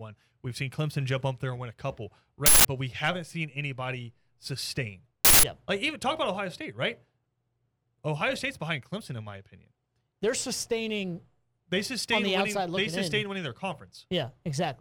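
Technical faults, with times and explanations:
2.46–2.65 s and 5.25–5.43 s, uninitialised buffer: right after "and win a couple" and again after "haven't seen anybody sustain", the speech is replaced by a loud burst of raw digital noise lasting about 0.19 s each time. A block of memory went out to playback before any audio was written into it, so its leftover contents were played as samples. Unlike a dropout, the gap is filled with harsh noise rather than silence. Unlike a single click, it lasts a whole block, and that length fits an 8192-sample buffer.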